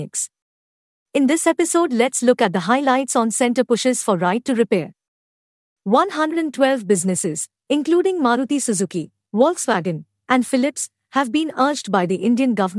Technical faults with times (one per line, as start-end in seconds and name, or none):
none